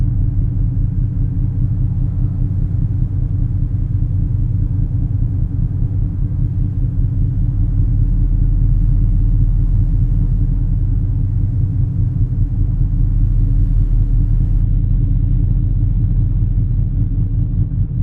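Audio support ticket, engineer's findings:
Adaptive stream at a lower bitrate, 14.63 s to end: connection slowed, player switched down to a lower-bitrate rendition with no gap. Abrupt quality drop. Nothing above 4.3 kHz, dull top, codec artefacts rise. Fits an Opus stream falling from around 64 to about 12 kbit/s.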